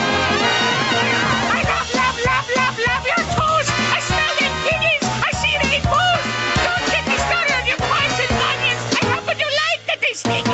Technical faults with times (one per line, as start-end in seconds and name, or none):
0.00-10.54 gain pumping